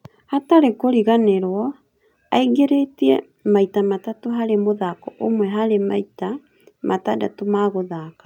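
No faults are audible anywhere in the speech recording.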